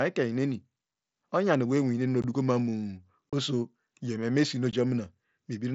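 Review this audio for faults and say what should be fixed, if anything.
You've got unconcealed Bluetooth headset packet loss in three spots: at 2.22 s, just before "mamu oso yeme mesinuo"; at 3.32 s, right before "oso yeme mesinuo"; and at 4.71 s, just after "mamu oso yeme mesinuo". Each is a short hole of roughly 15 to 30 ms with hard edges, the sort of gap you'd get when two to four headset frames go missing and the link drops in silence instead of patching over them. The mSBC wideband path itself comes through with its usual light graininess. To fix it, turn on packet loss concealment at the receiver and tighten up the radio link, with less distance and interference and better coexistence settings.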